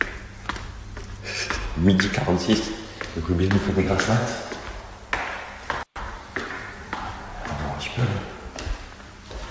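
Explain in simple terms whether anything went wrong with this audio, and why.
Nothing went wrong: the audio came through an ordinary internet call link working as designed, which leaves out everything above about 8 kHz, so the very top of the treble is missing, as it is on calls of this kind.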